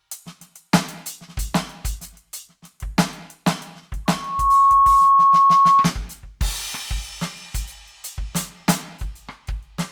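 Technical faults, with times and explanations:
4.05–5.94 s, loudspeaker feedback squeal: a 1.1 kHz tone swells over about half a second to roughly 15 dB above the music, as the microphone re-amplifies its own loudspeaker output.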